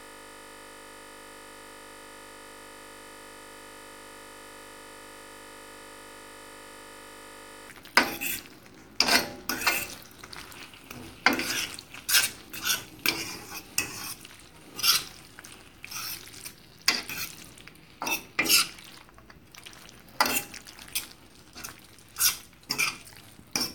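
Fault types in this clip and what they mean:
System hang loop: The system froze while the sound hardware kept replaying one ring buffer. A 20 ms slice of audio repeats exactly, hundreds of times. At 50 repeats per second it becomes a steady buzz. It is already under way at the start and ends at 7.69 s.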